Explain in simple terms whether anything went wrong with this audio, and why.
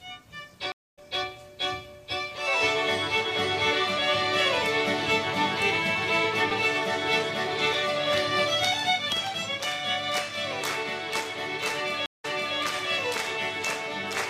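Two stream reconnects occur, at 0.72 to 0.99 s and at 12.06 to 12.58 s. Each time the connection dropped, the sound went silent (0.21 s, then 0.15 s), and the player restarted partway through. Unlike a simple dropout, the sound doesn't continue from where it stopped. The first time it jumps slightly ahead, skipping a short moment. The second time it goes back about 0.37 s and replays that stretch.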